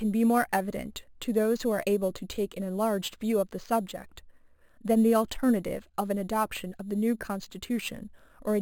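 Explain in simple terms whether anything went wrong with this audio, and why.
There's a steady fault the whole way through: imaging from sample-and-hold upsampling. The speech seems to have started at roughly 11 kHz and been stretched to 48 kHz by copying samples, leaving a thin metallic fizz from about 5.5 to 11 kHz that rises and falls with the talking.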